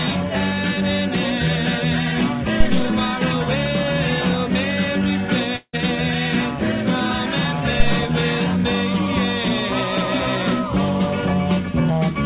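At 2.60 s a deep low thump hits the audio and dies away within about 90 ms, with its tail running to 3.00 s. That is a phantom power thump, where switching a supply on a live input sends a voltage step through the coupling capacitors. From 5.56 to 5.79 s the sound smears into a fading buzz for about 170 ms, then drops to roughly 60 ms of silence, and resumes with about 180 ms of material gone. The likely cause is a long network dropout, with the receiver concealing the gap before giving up. Throughout the clip nothing is heard above 4 kHz, which fits the G.711 mu-law coding of the call path.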